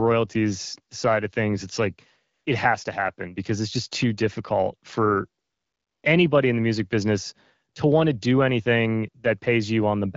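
A speech clip in which the background three times gives way to a smooth, steady hiss that switches in and out: at 2.33 to 2.45 s after "of things it's like", at 5.41 to 6.03 s after "just too difficult for", and briefly at 7.73 to 7.75 s after "in the music business". This is AMR comfort noise. The phone judged those pauses silent and stopped sending speech frames, so the receiver synthesised filler noise from a rough level-and-spectrum description. The wideband coding, whose light artefacts fit about 12.65 kbit/s, carries the speech itself.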